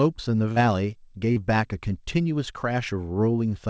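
Speech heard through a call link that carries nothing above 8 kHz, with two brief smeared wobbles at 0.52–0.59 s and 1.32–1.39 s. These are short concealed packet losses: about 40 ms of audio arrived too late, and the receiver filled each gap by extending the preceding sound.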